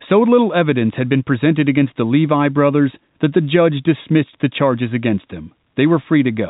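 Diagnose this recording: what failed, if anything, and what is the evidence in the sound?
Nothing failed here: the speech arrives through ordinary G.711 telephone coding, so it sounds narrow with nothing above 4 kHz, which is just how a phone line carries it, and there's no dropout, distortion or glitch anywhere to point at.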